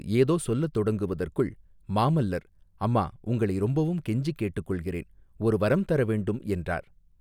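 No technical faults can be heard at any point in the speech.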